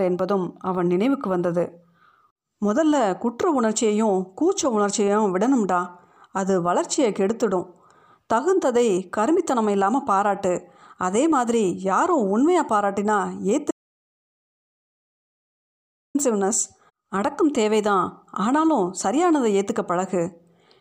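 An audio dropout to silence runs from 13.71 s to 16.15 s, cutting the speech off mid-flow for about 2.4 s. The gap holds silence with no room tone, likely because the input link failed while the recorder kept writing silence.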